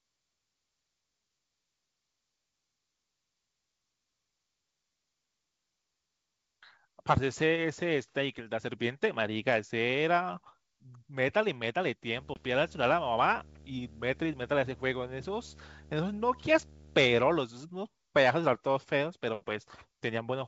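A display or video cable has coupled into the audio path of this speech recording. From 12.16 to 17.38 s this video or display buzz sits roughly 25 dB below the speech: a hum at the 75 Hz field rate with harsh hash riding above it. Inside that stretch, packet loss on an ADPCM call drops a 20 ms slice at 12.34 s, which points to a single lost packet. The decoder fills it with silence, and its adaptive predictor and step size lose track of the sender's. The sound therefore cuts out abruptly and comes back with brief, slight distortion before settling by 12.45 s. The G.722 wideband coding keeps the speech clear up to about 7 kHz, with a faint hiss in the upper band.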